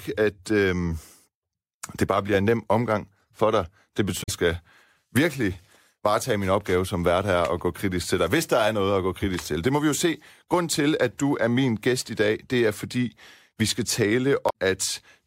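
At 4.19 to 4.29 s, just before "skal virkelig varetage min", and again at 14.46 to 14.52 s, damaged data in a compressed stream makes the decoder lose frame sync, giving a brief glitch.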